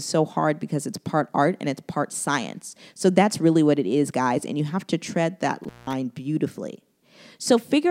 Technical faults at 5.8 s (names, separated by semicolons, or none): intermittent contact